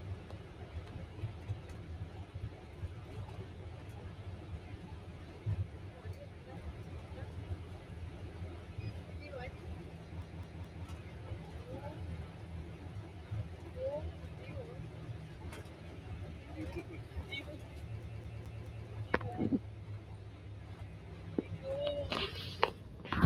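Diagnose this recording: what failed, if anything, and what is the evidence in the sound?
A noise suppressor designed for speech has been applied to this material throughout, a call-processing stage fault. Sustained tones, ambience and decay tails are treated as noise and pulled down while transients pass, so the level swings by roughly 5 dB across the clip. The result is an audible pumping and thinning of held sound after each attack, with tails collapsing early instead of decaying naturally.

The second failure is at playback: a CD stuck on one turn. From 10.22 to 10.85 s the same 0.21 s segment plays three times, and from 18.03 to 18.87 s it plays four times, with a brief mute at each jump. The identical loop length in both places points to a scratch that throws the laser back one track at the same spot on each revolution, producing the fast, even stutter of a skipping disc.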